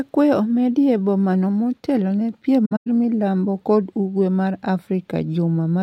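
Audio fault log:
2.65–2.87 s, AAC frame loss with muting: a scatter of lost frames, about 171 ms in all with the longest run around a tenth of a second, was decoded as silence. The overlapping windows fade the speech out and back in, leaving soft-edged gaps.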